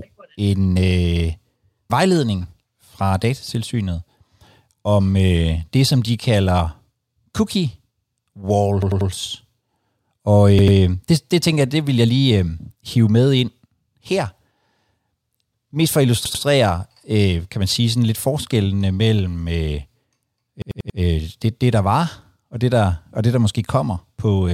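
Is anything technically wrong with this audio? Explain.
Yes. Repeated buffer stutters occur at 8.82–9.10 s, 10.59–10.77 s, 16.25–16.44 s (after "for at") and 20.62–20.99 s (before "øh det det der"). A roughly 93 ms chunk, which fits a 4096-sample buffer, replays two to four extra times when fresh audio arrives late. Unlike a dropout, the copies are identical with hard joins, and speech resumes without losing anything.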